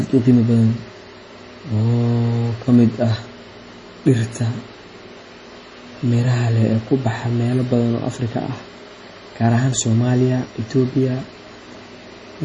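All the way through, the speech has nothing above 10.5 kHz and sounds watery and swirly, heavy MP3 compression, likely at a low bitrate around 32 kbps.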